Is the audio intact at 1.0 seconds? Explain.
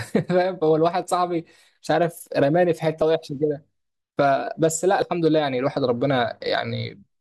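No. At 1.02 s there is an overlap between stream segments. Two consecutive 2-second segments claim the same stretch of time, so the player discards about 18 ms of speech that was never duplicated. The waveform jumps across the gap, producing a brief click or tiny skip.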